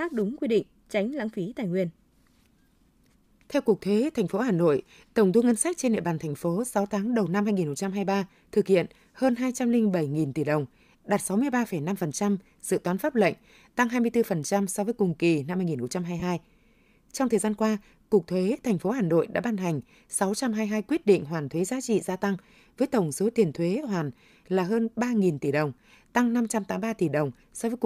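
From 16.20 to 16.22 s, the speech turns into a brief noisy smear lasting 22.5 ms. This is lost LE Audio frames. The gap fits three 7.5 ms frames. The decoder filled it by reusing the last spectrum with random signs, so tone becomes hiss.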